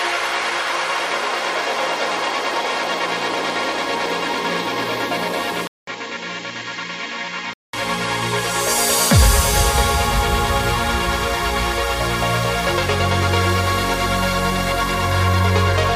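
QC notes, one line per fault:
5.67–7.73 s, input switched to a poorer device: after a gap of about 200 ms, the sound goes dull and boxy, with nothing above 7.6 kHz. It also drops by roughly 5 dB and picks up its own background noise, sitting around 30 dB under the signal. At 7.73 s it snaps back to full brightness. The likely cause is the input jumping briefly to a lesser mic or a headset's call profile and then returning.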